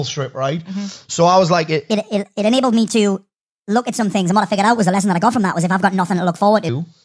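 Speech plays back with a wrong sample rate from 1.91 to 6.69 s, running 1.38 times fast and about 5.6 semitones high, which fits 16 kHz audio played at 22 kHz. Unlike a pure pitch shift or time-stretch, tempo and pitch rise together.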